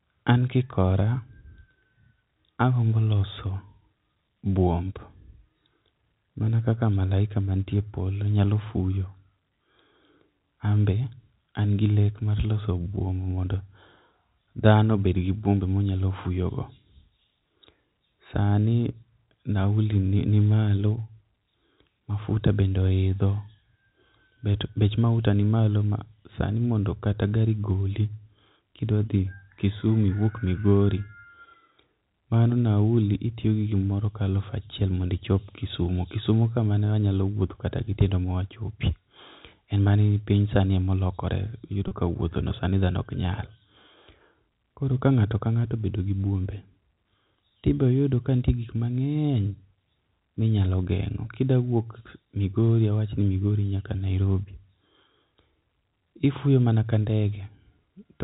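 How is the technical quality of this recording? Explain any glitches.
There's one glitch worth flagging, at 41.88 to 41.91 s, just before "ka wuothono sani dhano". That's packet loss with pitch repetition: about 30 ms of audio went missing, and the receiver filled the hole by looping the last pitch period, so you hear a brief held, slightly buzzy smear. The band tops out at 4 kHz, as G.711 telephone coding does, with any quantisation hiss faint at most.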